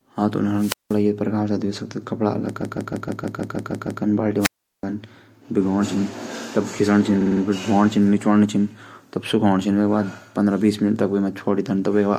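At 0.56 s a brief surge of hiss gives way to a hole of near silence lasting about 180 ms, and the speech returns by 0.99 s. This is a wireless microphone squelch dropout: the FM radio link from the transmitter faded, the receiver's squelch judged the signal too weak and muted its output, then reopened once the carrier recovered.

From 2.60 s to 4.01 s the speech stutters, with a 157 ms stretch heard again nine extra times. This is repeated frames: a short run of compressed frames was sent or written more than once, so the decoder replayed the same audio. The block length suggests about six frames, and the repeats add 1.41 s to the clip.

At 4.39 s the same wireless microphone squelch dropout returns, with a rise of static and then a longer mute of about 370 ms before the speech resumes at 4.83 s.

From 7.20 s to 7.41 s there is a quicker stutter. A 52 ms block is repeated four extra times, which fits roughly two frames, and the repeats add about 0.21 s.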